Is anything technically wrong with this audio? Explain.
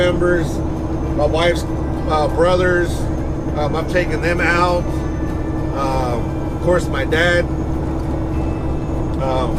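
No, I can't hear any technical fault here.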